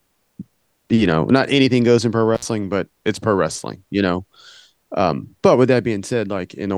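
Right around 2.35 s, just after "anything goes in pro", there's an intermittent contact: a loose plug or cable briefly loses connection. The speech drops out for about 59 ms, with crackle as the contact breaks and again as it catches, and a faint hiss in the gap. By 2.45 s the line's back, and "but it's pro wrestling" comes through.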